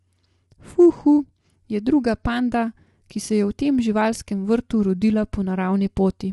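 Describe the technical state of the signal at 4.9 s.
Dropped samples at 4.90 s: a single sharp click cuts through the speech at that instant, a thin vertical line spanning the whole spectrum. The click likely comes from a couple of samples, a few hundredths of a millisecond, vanishing from the stream, so the waveform leaps straight from one value to a later one. The gap is far too brief to remove any audible sound; only the discontinuity itself is heard.

Low-delay AAC compression also colours this moment, as it does the whole clip. The speech sounds rough and grainy, with noise filling the spaces between harmonics and a lowered or synthetic top band. This damage is plainly audible and is likely due to AAC-ELD coding, whose short frames resolve pitch structure poorly. The degree of roughness fits a bitrate of around 32 kbps.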